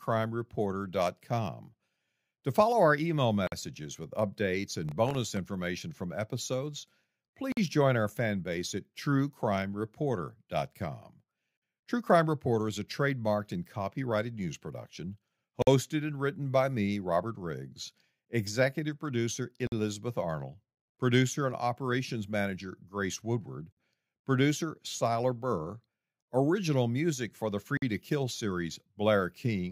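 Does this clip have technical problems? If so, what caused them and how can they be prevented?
Yes. A gap between chunks cuts the speech at 3.47, 7.52, 11.57, 15.62, 19.67, 23.72 and 27.77 s. Each hole is 50 ms of silence, and they repeat every 4 s. The audio is being handled in 4-second chunks, and each one starts late or carries padding. Trimming codec padding and queueing the next chunk before the current one ends would prevent it.

Processor overload crackle runs from 4.89 to 5.37 s. It sounds like a gritty tearing on top of the speech. The processor missed about ten buffer deadlines there, and each miss left a tiny silent hole. The holes point to very small buffers, under a millisecond long. Larger buffers or less processing load would prevent it.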